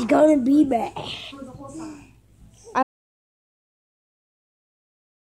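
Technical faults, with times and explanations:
2.83 s to the end: audio dropout to silence. The sound cuts off abruptly mid-flow and never returns, leaving dead silence with no room tone for the final 2.4 s. The input was likely lost, through a disconnection or mute, while recording continued writing silence.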